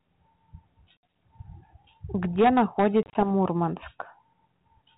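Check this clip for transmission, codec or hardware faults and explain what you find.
Two kinds of fault are present in this speech, which travels over 32 kbit/s G.726 ADPCM: packet loss on an ADPCM call, twice, and hard clipping.

Packet loss on an ADPCM call occurs at 0.99 to 1.01 s, with about 60 ms lost, and at 3.03 to 3.26 s, where about 80 ms goes in short gaps over 120 ms, the longest 30 ms. Silence fills each gap. The decoder's predictor and step size drift from the sender's. Speech returns with a hard edge and brief distortion.

Hard clipping runs from 2.23 to 4.00 s, overdriven by about 8 dB. Peaks exceed what a stage can pass and are cut flat. The flattened tops add high harmonics, heard as harsh fuzz on loud syllables throughout that stretch.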